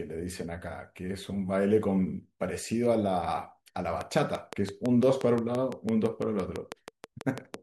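From about 4.01 s to 7.55 s the speech picks up a train of clicks: a steady tick at roughly six per second, around twenty in all, standing well proud of the signal. They carry on through the pauses too, so likely interference or a struggling interface rather than anything in the recording itself.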